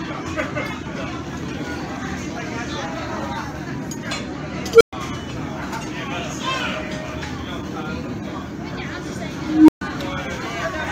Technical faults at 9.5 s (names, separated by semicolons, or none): unstable filter